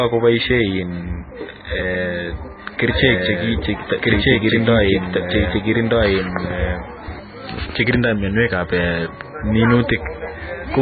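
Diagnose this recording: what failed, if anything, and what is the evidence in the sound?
Codec stage first: the whole clip has nothing above 4.5 kHz and a watery, swirly texture on the speech, with smeared consonant attacks. That's heavy damage, likely from MP3 compression starved of bits, which fits a very low bitrate around 16 kbps.

Second problem, a doubled audio track from 2.84 to 7.20 s: a full-band copy runs about a second and a half behind at roughly the same level, dry, starting and stopping abruptly. Likely an edit or a second capture path mixing in an out-of-step duplicate.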